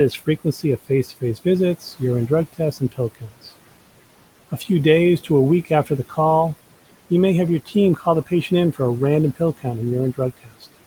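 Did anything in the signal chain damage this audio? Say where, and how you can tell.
Yes. The damage comes from call processing, at the noise suppressor. Noise suppressor artifacts run through the whole clip. The room noise, sitting about 18 dB below the speech, sinks by about 18 dB between phrases and swells back under them.

The same stage causes speech cut by the noise suppressor at 0.11–1.46 s, 1.8–3.47 s, 5.65–6.18 s, 7.66–8.8 s (after "you may have your"), 9.35–9.66 s (after "a random") and 10.16–10.66 s. Soft sounds fall by about 13 to 19 dB. The suppressor mistook them for noise.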